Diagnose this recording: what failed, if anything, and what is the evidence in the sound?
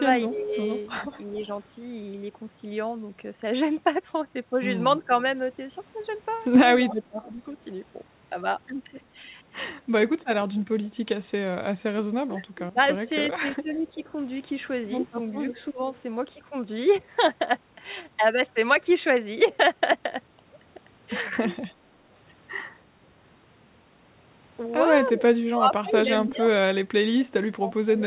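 Speech dips by up to about 25 dB at 0.29–1.37, 5.05–7.57, 11.95–15.82 s and from 25.16 s on. This is call processing: likely speech suppressed in double talk.

A faint copy trails 327 ms behind, about 30–35 dB down, at 1.18–1.4, 5.03–7.24 and 15.55–16.0 s: likely echo leak past a loudspeaker-side echo canceller.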